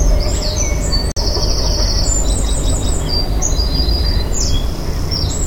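At 1.12 s the audio cuts out abruptly, with about 48 ms of silence before it resumes at 1.18 s. This is most likely a Bluetooth stall: interference held up packets on the wireless link, the receiving buffer emptied, and playback waited for the resent data. Unlike a concealed packet loss, which smears or repeats the sound across the gap, this leaves a true hole of silence, and the sound then picks up again.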